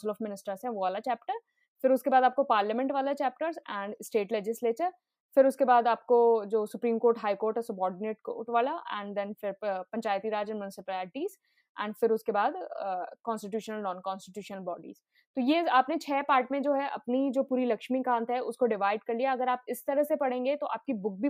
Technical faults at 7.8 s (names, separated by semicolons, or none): none